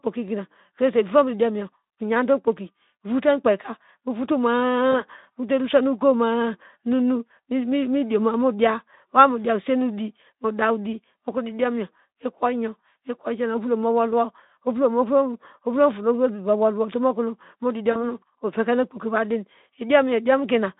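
At 4.91 to 5.01 s and again at 17.91 to 18.06 s, VoIP packet loss concealment kicks in: the Speex decoder stretches the last sound into a fading buzz or coloured noise, about 20 then 40 ms missing.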